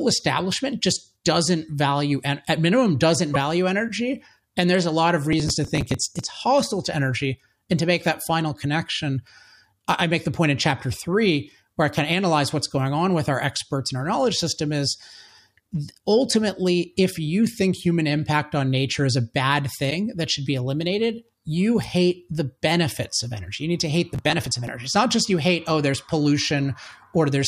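At 3.33 to 3.36 s the sound jumps ahead, likely a broken MP3 bit reservoir: lost frames of about 26 ms each leave the next frames borrowing the wrong bytes. From 5.33 to 6.29 s comes processor overload crackle. Dozens of roughly 5 ms buffers miss their deadline and are skipped, leaving gritty tearing. At 19.89 to 19.92 s the same skip returns. From 24.15 to 24.68 s the crackle recurs, with fewer missed buffers.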